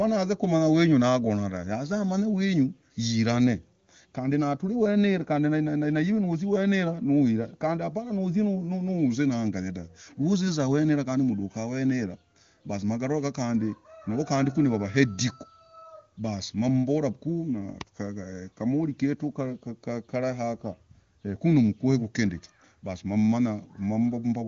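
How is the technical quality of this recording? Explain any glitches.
Nothing here counts as a glitch: it has the sound of wideband phone audio, with the top end stopping at about 7.2 kHz, which fits the AMR wideband (HD Voice) codec running at one of its higher rates, around 23.85 kbit/s.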